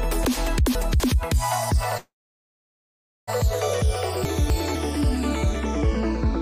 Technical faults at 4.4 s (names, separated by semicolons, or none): chunks out of order